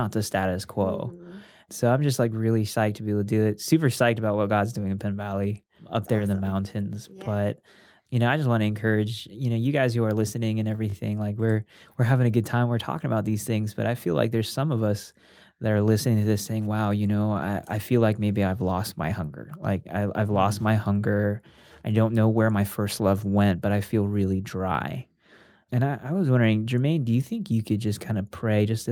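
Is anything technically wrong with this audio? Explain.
Yes, there are two repeated buffer faults in this speech clip. New audio failed to reach the playback device in time, so it played its last block again, a block of about 20 ms. At 10.90 to 10.94 s that block sounds three times in a row, and at 14.48 to 14.50 s it sounds twice. Each repeat joins the next with a hard edge, so the listener hears a brief stutter or buzzy click rather than a gap. Almost nothing of the speech is lost.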